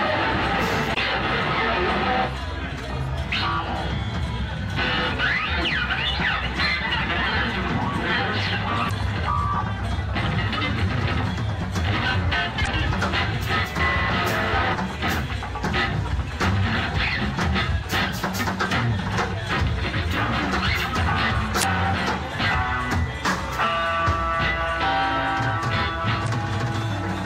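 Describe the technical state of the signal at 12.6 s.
Damaged data in a compressed stream occurs from 12.63 to 12.68 s, a span of about 44 ms. Here some of the encoded bytes reaching the decoder were wrong, whether lost, zeroed, overwritten or mixed with unrelated data. The decoder misread or rejected the affected frames, lost its place in the stream and searched for the next valid frame header before resuming. The result is a brief, abrupt disruption in the audio lasting for that span.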